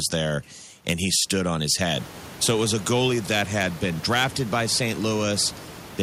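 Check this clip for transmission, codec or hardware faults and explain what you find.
Nothing attributable to transmission, codec or hardware turns up in this speech; the one change is room noise at the microphone, which rises by about 17 dB around two seconds in and then sits about 18 dB below the speech, a property of the recording rather than the system.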